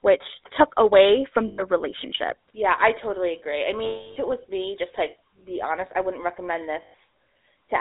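A speech clip carried over a phone line with the GSM full-rate codec. The band runs only from 300 Hz to 3.7 kHz, and the voice has a plainly audible buzzy, gravelly roughness, which fits 13 kbps full-rate coding. There are also lost GSM frames, where the decoder holds the last good sound as a metallic ring. This happens from 1.48 to 1.63 s after "which took away from" and from 3.84 to 4.17 s between "I totally agree I" and "it was me just". It happens again from 6.82 to 6.94 s after "honest I wouldn't recommend". The middle gap lasts about 320 ms.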